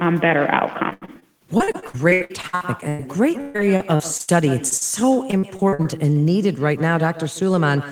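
Echo with no canceller runs through the whole speech clip. The far end's loudspeaker feeds its microphone and nothing cancels it, so every phrase returns about 150 ms later as a thinner copy about 15 dB below the direct speech.

Repeated packet loss (robotic sound) hits from 0.89 to 3.01 s, then again from 3.41 to 4.29 s. Holes in the stream keep recurring, each patched by stretching the last sound, so about a third of each stretch is synthetic. The speech turns choppy, with gaps up to 101 ms and 136 ms respectively.

Short concealed packet loss follows at 4.69 s and 4.77 s, lasting about 20 ms and 40 ms. The receiver bridges each missing slice by extending the preceding sound and blending back, leaving a brief smear or wobble where a short consonant may drop out.

Repeated packet loss returns from 5.31 to 5.86 s. About a third of this span is again concealed, though the holes are shorter, none beyond 44 ms, giving choppy sound with brief pieces missing rather than longer dropouts.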